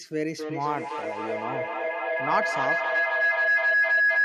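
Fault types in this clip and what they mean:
Feedback howl: Two devices in one room share the call, so each pass from loudspeaker to microphone comes back louder. From about 0.39 s a howl near 1.5 kHz builds until the end. It pulses roughly every 0.3 s and peaks about 6 dB above the speech.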